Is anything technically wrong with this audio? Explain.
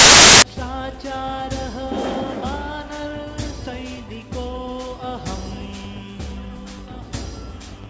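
Yes. From 0.00 to 0.42 s, file tags are played as audio. Compressed cover-picture data is decoded as samples, giving a hard-edged burst of very loud white noise.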